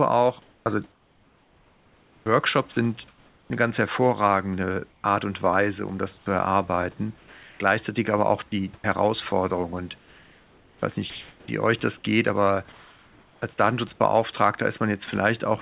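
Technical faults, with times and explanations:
0.42–3.5 s, sound chopped by the voice detector: the sender's voice detector likely kept switching off, replacing about 2 s of speech with comfort noise before "eine ganz hervorragende", so the speech sounds choppy.
4.9–13.42 s, sound chopped by the voice detector: after "eine ganz hervorragende", detection likely toggled repeatedly, swapping about 2.7 s for synthetic noise, so parts of the speech drop out.
15.06–15.08 s, sound dropped by the voice detector: the detector likely took part of the speech for background and stopped sending, leaving a 20 ms gap filled with steady comfort noise.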